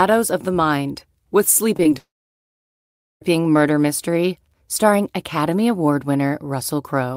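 Right after "of the mind with", there's a quick run of short concealed packet loss at 1.77–1.79 s, 1.83–1.86 s and 1.91 s. Each loses about 10 ms of audio, and the receiver patches it by extending the previous sound, so you hear tiny smears.

Then from 1.98 to 3.22 s it's a likely long network dropout. A brief continuation of the last sound fades away, leaving roughly 1.15 s of silence, and the audio picks up again at "murder mystery starring" with that stretch simply gone.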